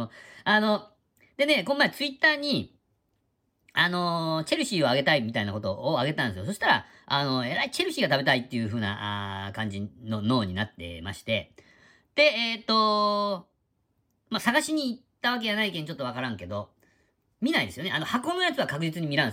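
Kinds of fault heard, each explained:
Nothing stood out as a technical fault on listening to this speech recording.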